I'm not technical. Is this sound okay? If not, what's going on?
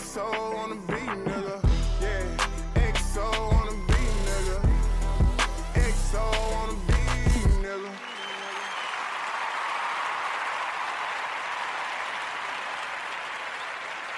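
Yes, it's fine; nothing here is broken or faulty.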